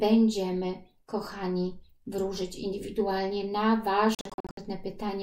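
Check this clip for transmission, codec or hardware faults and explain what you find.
One fault is audible, near the end of the clip.

Bluetooth dropout, 4.15 to 4.57 s: the likely cause is wireless packets reaching the headphones too late and being discarded, muting output until good data returns. The sound breaks into abrupt silent gaps, the longest 64 ms, totalling about 277 ms over 427 ms, then resumes as if it had kept playing.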